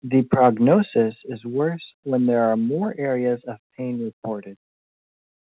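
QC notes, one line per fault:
0.33–0.74 s, microphone overload: the loudest peaks in this stretch go past full scale by about 4 dB and are flattened, with roughly one percent of samples sitting at the limit. The squared-off tops add a harsh, crackly grit to the strongest syllables rather than simply making them louder. The likely cause is an input gain set too high, so the converter runs out of headroom before the peaks are fully captured.
1.02 s and 3.06 s, microphone volume stepped down: the whole signal, voice and background together, drops abruptly in level, by about 3 dB at the first point and about 2 dB at the second. The change is a single step with no fade, so it registers as a sudden dip rather than a natural move away from the microphone. The first step follows the clipped passage, consistent with the call software reacting to the overload by lowering the device's input volume. 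Throughout, the audio carries nothing above 4 kHz, which fits the narrowband telephone coding on the call path.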